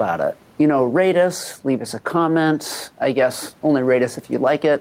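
Gain pumping runs throughout the speech, with level swinging around 5 dB as loud moments are pulled down, likely from excessive input gain driving a fast limiter or compressor. Room noise sits about 36 dB below the speech.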